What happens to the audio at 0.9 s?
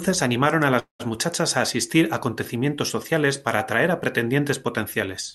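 Between 0.79 and 1.02 s a call audio freeze stalls the speech. The last sound smears into a fading buzz or hiss, then about 130 ms of silence, likely from delayed packets draining the jitter buffer. Speech resumes where it stopped. A spectrogram shows a blurred, fading band and then a blank gap.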